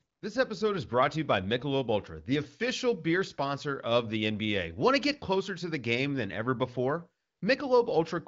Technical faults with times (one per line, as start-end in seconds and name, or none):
none